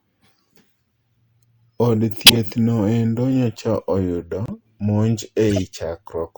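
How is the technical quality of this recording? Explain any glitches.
The recording is marred by three decoding glitches in the compressed stream.

At 2.26 to 2.37 s, a corrupt frame decoded: flipped bits across a few frames were played anyway, throwing a harsh burst near full scale at wrong frequencies.

At 5.50 to 5.64 s, another corrupt frame decoded, spanning several frames, produces a quieter burst of misplaced energy.

At 4.46 to 4.53 s, a corrupt frame muted: the decoder rejected damaged frames and silence replaced them, leaving an abrupt 76 ms hole that fits four lost frames, with timing preserved.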